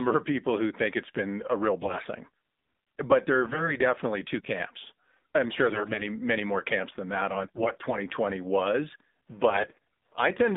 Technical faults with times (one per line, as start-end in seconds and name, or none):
0.00-10.57 AMR narrowband mobile codec
1.82-2.06 AMR bit errors
3.42-3.75 AMR bit errors
5.64-6.02 AMR bit errors
7.34-7.98 AMR bit errors
9.50-10.28 AMR bit errors